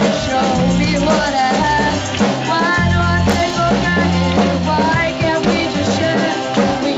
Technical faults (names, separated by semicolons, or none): processor overload crackle